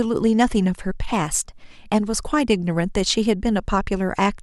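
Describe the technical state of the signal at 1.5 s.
At 1.5 s the speech runs about 6.1% fast and roughly a semitone (103 cents) sharp, within a drift correction step from 1.12 to 1.64 s. This is likely clock-matching software jumping the playback rate to rebalance its buffer. Unlike wow or flutter, the shift is one steady step that snaps back, not a wobble.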